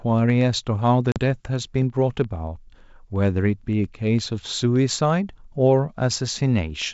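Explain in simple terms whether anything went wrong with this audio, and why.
Packet loss on an ADPCM call hits at 1.12 to 1.20 s: a couple of packets, about 40 ms of sound, drop out and leave a sharp-edged silent gap. Afterwards the decoder has lost track of the sender's running prediction, so the sound resumes slightly off before settling.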